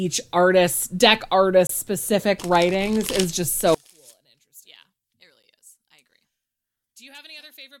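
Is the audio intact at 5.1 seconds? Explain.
No. From 3.75 s, right after "specific writings is just", to the end of the clip, the speech drops by about 30 dB. Only a faint residue remains. The likely cause is one channel inverted. One stereo channel has its polarity flipped. When the two channels are summed to mono, whatever they share cancels. The centred speech nearly vanishes. Only the small difference between the channels survives.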